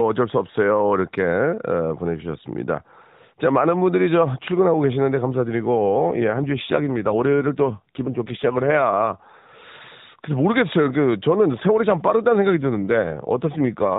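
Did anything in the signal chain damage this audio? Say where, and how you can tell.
Yes, at the codec stage, through an AMR rate drop from 5.85 to 9.17 s and again from 12.50 s to the end. The voice turns buzzier and more synthetic with no gaps and the same 4 kHz band, which fits the link forcing AMR-NB from 12.2 down to 5.9 kbps rather than packet loss.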